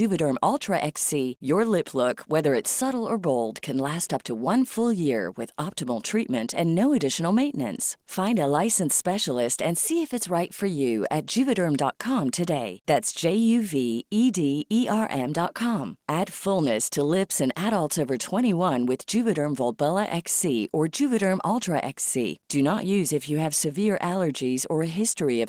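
No technical faults can be heard anywhere in this speech recording. Nothing in the audio points to a problem with how it was captured or delivered.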